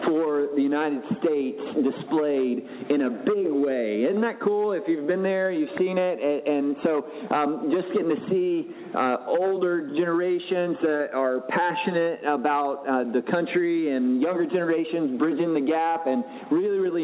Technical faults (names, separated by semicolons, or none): none